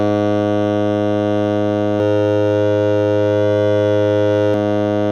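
A music clip with a doubled audio track from 2.00 s to 4.54 s: a second full-band copy of the music runs roughly 400 ms behind, at about the same level, with no decay or room colour, and it cuts in and out abruptly at both ends. On a waveform or spectrogram, each onset reappears as a matching copy shifted right by that fixed gap. The likely cause is a second, slower capture path or an edit leaving two copies out of step.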